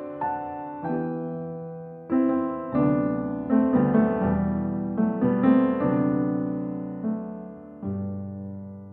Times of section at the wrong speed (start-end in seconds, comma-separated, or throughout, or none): none